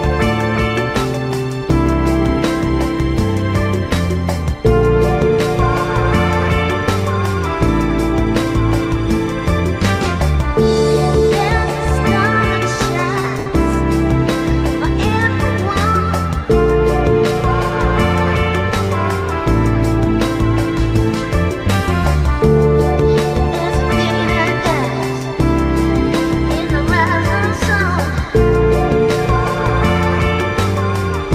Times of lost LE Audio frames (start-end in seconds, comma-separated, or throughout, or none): 13.38-13.46